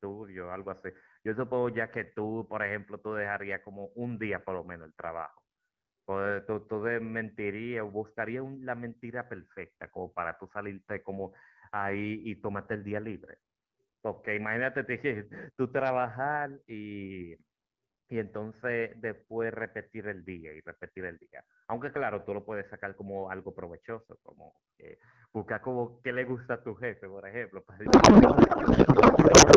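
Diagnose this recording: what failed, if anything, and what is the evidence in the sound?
The failure is at the codec stage, a codec payload misread. From 27.85 s to the end of the clip at 29.56 s, the speech turns into garbled noise and warble that barely tracks it. Before that, the speech has the clarity of AMR wideband at a rate consistent with 12.65 kbit/s. The receiver is unpacking the AMR frames in the wrong layout, reading octet-aligned payloads as bandwidth-efficient. The decoder then takes bits from the wrong fields and synthesises nonsense.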